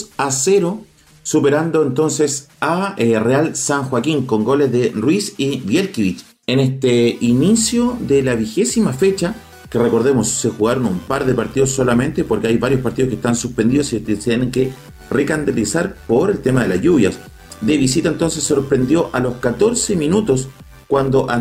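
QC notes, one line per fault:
10.85–21.41 s, overlap-add ripple: rough, buzzy flutter around 100 Hz, level pulsing about 6 dB each frame because overlapping windows no longer sum to constant gain.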